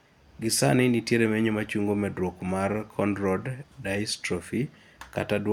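A short speech recording with no audible technical faults anywhere in the signal.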